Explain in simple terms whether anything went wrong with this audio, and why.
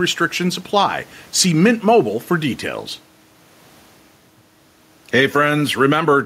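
Something did go wrong here, and it lasts the whole clip. The fault is gain pumping. Every time the speech gets loud, the overall level drops. In each pause it climbs back up. The room noise itself is normal. The swing is large, and loud and soft speech end up squashed together. The likely cause is a microphone set far too loud, with an automatic limiter pulling it back.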